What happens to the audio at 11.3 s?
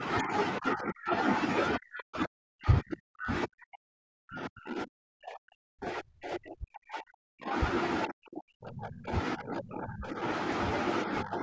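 At 11.3 s the speech sinks sharply in level, dropping by around 15 dB over roughly the final third of a second, from 11.06 s to 11.42 s. This is speech suppressed in double talk, likely caused by the far end talking at the same moment: the echo canceller could not tell this talker from the loudspeaker echo and turned both down together, pulling down the tail of the speech.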